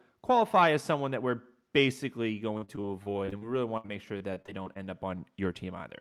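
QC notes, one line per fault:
2.57–4.77 s, repeated packet loss (robotic sound): across this 2.2 s stretch the speech breaks into a rapid series of short holes, roughly one every 130 ms, the longest about 65 ms. The receiver papers over each hole by extending the last good audio, about 20% of the span in total, so the repeated fragments give a robotic quality, while roughly 360 ms of actual content never arrives, leaving the passage choppy with pieces missing.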